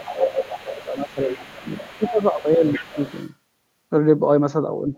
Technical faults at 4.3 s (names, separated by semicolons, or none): none